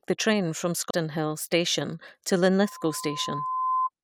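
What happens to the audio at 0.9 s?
Right after "the train from" there's a CD skip from 0.91 to 0.93 s: the laser jumps tracks, so it briefly mutes for about 30 ms and resumes elsewhere.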